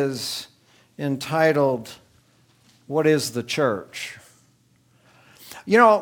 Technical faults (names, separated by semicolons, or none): clock slip clicks